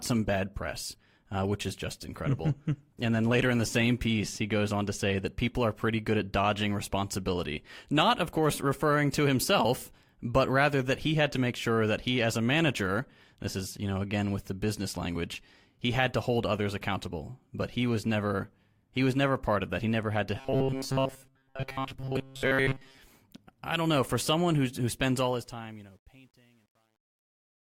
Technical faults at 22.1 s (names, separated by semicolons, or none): robotic sound from repeated short buffers